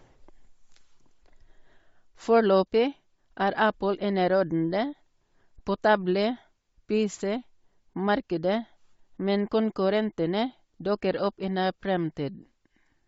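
Throughout the speech, the highs sound grainy and breathy, noise-filled rather than simply dulled. This is likely Bluetooth LC3 compression, which fits 32 kbps with 10 ms frames.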